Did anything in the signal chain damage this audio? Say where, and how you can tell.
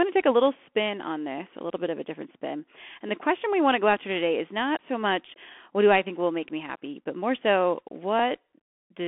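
Yes. The damage is at the codec stage and runs through the whole clip: a Bluetooth CVSD headset codec. The band sits at 250 Hz to 3.4 kHz with nothing above 3.8 kHz, and a grainy hiss rides under the speech while s sounds turn scratchy and loud bright passages distort. A plain telephone band-limit would not add that hiss or scratch. The one-bit up/down coder, consistent with 64 kbps, lets its adaptive step lag fast high-frequency swings.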